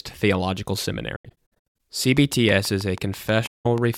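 From 1.16 to 1.75 s the speech breaks up with AAC frame loss with muting. Roughly 384 ms of audio drops out, scattered across about 640 ms as several short holes. The longest gap is about a tenth of a second. The decoder zeroes the missing spectrum, so each hole fades out and back in across the overlapping windows. The dropout pattern fits a run of lost frames of roughly 21 ms each.

From 2.17 to 3.95 s a train of clicks ticks over the speech at a regular 6.2 per second, around ten pulses of similar shape. They peak at about 10 dB above the signal and stay audible through pauses. The likely cause is electrical interference or a faulty connection injecting pulses.

Inside that stretch, from 3.46 to 3.66 s, a second AAC frame loss with muting removes about 192 ms. It is heard as a soft-edged silence.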